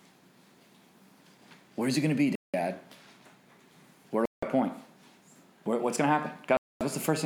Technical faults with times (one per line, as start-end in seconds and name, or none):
2.35-2.54 Bluetooth stall
4.25-4.43 Bluetooth stall
6.57-6.81 Bluetooth stall